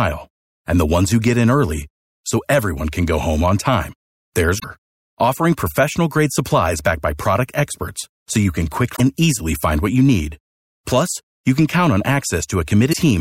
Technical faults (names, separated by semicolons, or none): damaged data in a compressed stream